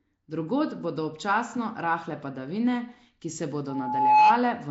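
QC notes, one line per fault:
Throughout: Nellymoser compression likely, at a rate fitting 32 kbps; plainly audible rough, hissy, smeared speech, spectrogram showing noise-filled bands and nothing above 7.7 kHz.
3.69–4.42 s: loudspeaker feedback squeal after "rahle padavine ki se"; an 854 Hz loop tone builds over about half a second to roughly 15 dB above the speech, a bright horizontal spectrogram line.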